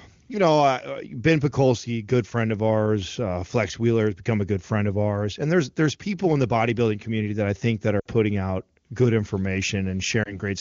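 Speech with a brief drop to near silence at 7.99–8.06 s and a brief dip or warble at 10.24 s, both lost AMR speech frames over clear wideband audio, where the decoder extended the last good frame with falling gain.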